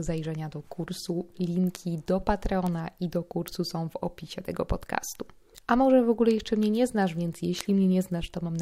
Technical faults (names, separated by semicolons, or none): bit error spike